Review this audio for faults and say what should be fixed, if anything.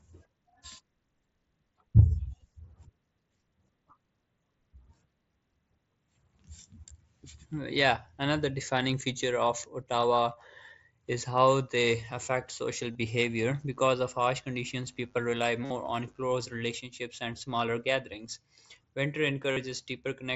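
Concealed Bluetooth headset packet loss occurs four times: a single brief event at 7.50 s lasting 7.5 ms, then 12.93–12.95 s (22.5 ms) just after "how they affect social", 15.65–15.70 s and 19.51–19.57 s (52.5 ms each). The receiver filled each gap by repeating a recent stretch of waveform. Unlike a plain dropout, the gap is never silent. The longer two come out as a held buzzy tone with a slight warble as real speech resumes. To prevent it, keep the headset close to the phone with a clear line of sight and away from 2.4 GHz congestion.

Mains buzz runs from 13.19 s to 16.52 s, starting after "how they affect social" and ending before "relationships and smaller gatherings". It sits around 40 dB below the speech. Sharp switching spikes twice per 50 Hz cycle produce a dense ladder of harmonics reaching into the kilohertz range. This makes it a raspy buzz rather than the smooth, low hum of a ground loop, and it persists under the speech instead of breaking it up. 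To prevent it, move away from dimmers and switch-mode supplies and use properly shielded, grounded cabling.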